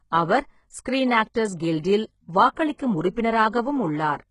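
From start to finish, the upper half of this speech sounds synthetic: sibilants come out gritty and metallic, and nothing is present above 11 kHz. This is heavy damage, most likely from HE-AAC compression at a very low bitrate, around 12 kbps. Only the lower spectrum is actually coded. The treble is rebuilt by copying lower bands upward under a coarse envelope, so its harmonics never line up with the real ones.

At 1.34 s a brief wash of hiss arrives just ahead of an attack and dulls its edge. At 2.54 to 2.57 s the same thing happens over a longer 30 ms stretch, and that attack sounds smeared. This is pre-echo. The codec spreads quantisation noise evenly across each transform block, so noise scaled for a loud onset late in the block also fills the quiet moment before it.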